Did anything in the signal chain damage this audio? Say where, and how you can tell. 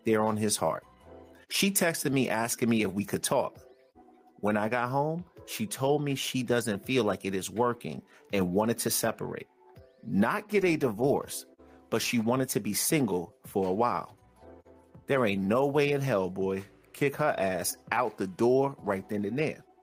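Yes. The input gain was likely set far too high, with a fast limiter or compressor clamping it on every loud sound. Throughout, the gain pumping swings the gain by around 5 dB and leaves the dynamics squashed.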